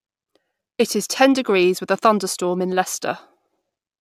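From start to finish, the speech carries a crude rate conversion. New samples were made by straight-line interpolation between neighbours, with no anti-imaging filter. The resulting error fits a conversion from 32 kHz to 48 kHz, a 2:3 ratio. Because that ratio repeats, the error forms tones unrelated to the speech, roughly 25 dB below it. They sound like a gritty, inharmonic fizz. It rides on louder syllables and on bright sibilant sounds.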